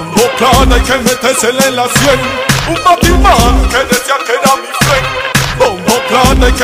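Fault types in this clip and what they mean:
hard clipping: Somewhere in the chain the signal was pushed about 5 dB past what a stage could pass, so every peak that exceeded the limit was sliced flat instead of following its true shape. Roughly one sample in twenty lands on that ceiling, across the whole clip. Those squared-off tops generate extra harmonics reaching high into the spectrum, so the loudest moments throughout the audio carry an added gritty distortion.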